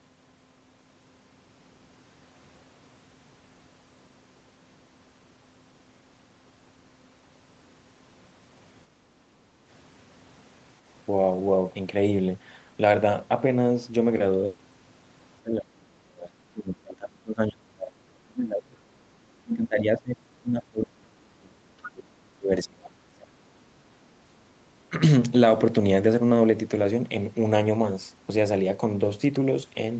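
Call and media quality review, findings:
Background gated by the echo canceller, 8.96–9.65 s. Room sound dips about 6 dB while far-end audio plays, then recovers when suppression releases.

Speech suppressed in double talk, likely. Talker dips up to roughly 30 dB at 15.42–16.34, 16.5–18.81, 19.4–20.24, 20.41–23.67 s, with brief cuts at 24.24 and 24.89 s. The echo canceller mistakes near-end speech for echo.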